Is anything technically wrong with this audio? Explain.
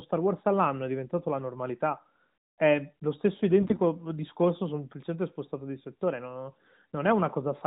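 Yes, there's one clear fault in this speech clip. From 3.60 to 3.80 s, right after "lo stesso" and before "discorso semplicemente spostato di", you get AMR bit errors. The lightly protected bits in the codec frames came through corrupted, around one bit in ten, while the frame checksum still passed, so the decoder trusted bad data. Its excitation pulses land in the wrong spots and the fine pitch, gain and spectral values drift. Level and pitch roughly hold, but the voice turns hoarse, scratchy and gargly for that 200 ms, which fits about ten 20 ms frames. The AMR narrowband mobile codec itself sounds like a fairly high mode, with the usual ceiling of 4 kHz.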